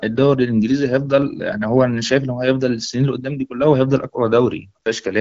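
No technical faults can be heard in the speech.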